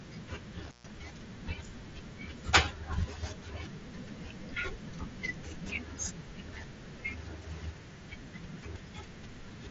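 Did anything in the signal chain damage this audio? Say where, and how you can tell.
Yes. An intermittent contact in the analogue wiring breaks the speech between 0.65 and 0.91 s. The line opens for about 130 ms, with crackle at each edge and faint hiss in the gap, as a loose plug or cable briefly loses and regains contact. The audio also arrives through a Bluetooth mSBC headset link, which can be heard in the band stopping near 7.8 kHz.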